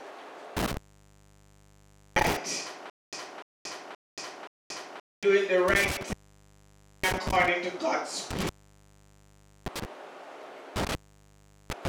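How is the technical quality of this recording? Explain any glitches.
The recording has two kinds of fault: repeated dropouts from an intermittent contact and a stretch of stutter with silent gaps.

Intermittent contact occurs at 0.57–2.37 s, 5.68–7.48 s, 8.31–9.85 s and from 10.76 s to the end. A loose cable or plug breaks the signal path, so the audio cuts out for roughly 1.4 s, 0.91 s, 1.17 s and 0.75 s. Crackle marks each break, and faint hiss is left while the line is open.

Stutter with silent gaps runs from 2.90 to 5.23 s, likely caused by a player or stream stall where each retry replays the last buffered fragment. A 0.30 s burst of sound repeats four times every 0.52 s, with 0.23 s of dead digital silence between, and the audio that should have filled that time is lost.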